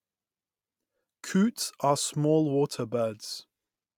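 At 1.62 s, just before "are small water", and again at 3.38 s, right after "are small water", compressed frames are skipped. The decoder drops a couple of frames (around fifty milliseconds), then a single frame (about twenty), so the speech lurches forward. The waveform shows an abrupt splice, and the spectrogram shows a thin vertical seam.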